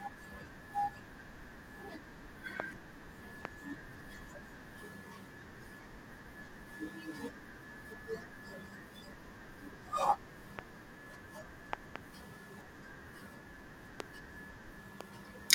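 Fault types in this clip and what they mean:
Loud pop: a sudden voltage step or spike, likely from a plug being disturbed, a switch, a static discharge or a driver glitch, is added to the signal and shaped by the circuitry after it. Here it produces brief, sharp pops standing roughly 20 to 25 dB above the speech, which carries on underneath, at 2.6, 3.45, 10.59, 14.0 and 15.0 s, plus a double pop spread across 11.73 to 11.98 s.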